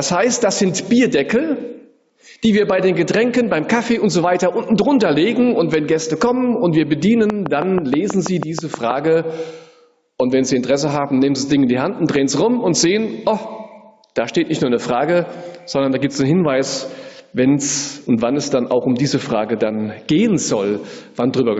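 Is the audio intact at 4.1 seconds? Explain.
No. Gain pumping runs through the whole clip, including 4.1 s. The gain swings by around 10 dB, squashing the dynamics, likely from gain set far too high with a fast limiter clamping down.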